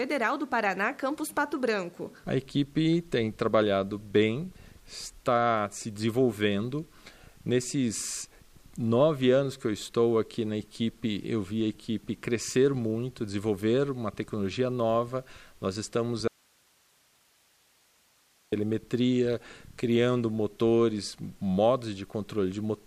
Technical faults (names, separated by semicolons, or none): audio dropout to a faint residue